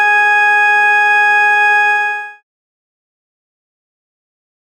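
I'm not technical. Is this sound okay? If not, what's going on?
Yes, nothing is wrong here.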